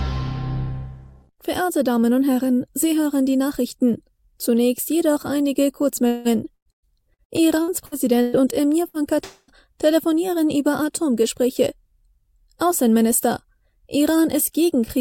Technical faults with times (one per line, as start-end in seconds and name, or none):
6.07-8.36 repeated packet loss (robotic sound)
8.88-8.97 burst of packet loss
9.24-9.51 long network dropout